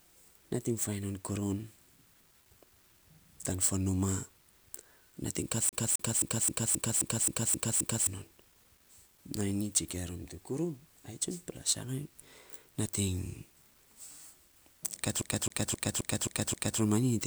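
CD stuck on one turn hits this speech recording twice, from 5.69 to 8.07 s right after "nating kat" and from 15.22 to 16.80 s just before "romanyi nyi". A scratch keeps knocking the laser back one track per disc rotation, so the same 0.26 s slice replays with a brief mute at each jump, nine times in the first run and six in the second, producing the rapid, evenly spaced stutter of a skipping CD.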